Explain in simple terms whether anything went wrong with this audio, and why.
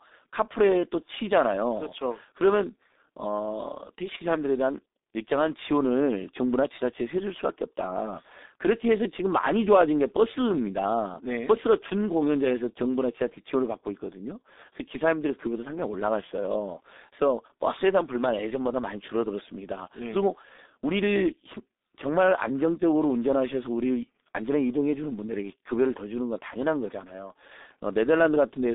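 Throughout the recording, the speech passes through a G.723.1 codec, an old internet-telephony format that squeezes audio into very little data. Nothing above about 3.8 kHz survives, and the low end starts near 250 Hz, so the voice sounds muffled, hoarse and thin, with smeared consonants.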